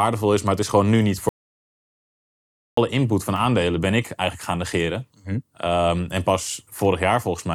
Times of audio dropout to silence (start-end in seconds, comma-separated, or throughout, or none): 1.29-2.77